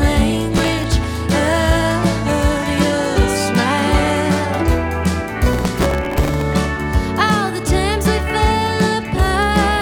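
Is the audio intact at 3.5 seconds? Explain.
Yes, at 3.5 s the audio plays through cleanly, with no dropout, click, distortion or other fault at that moment.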